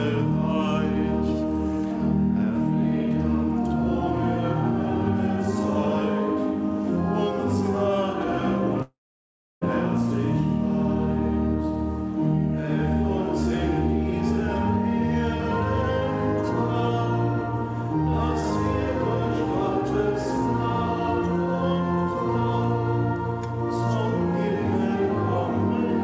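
At 8.82 s the sound breaks up: the last moment is stretched into a buzzy, hissy continuation that fades away, leaving about 0.66 s of near silence before the audio resumes at 9.63 s with roughly 0.8 s of material simply gone. This is a long network dropout, likely caused by packets failing to arrive, with the receiver concealing the gap until it runs out. Throughout, the call codec's band limit is audible, with nothing above 8 kHz.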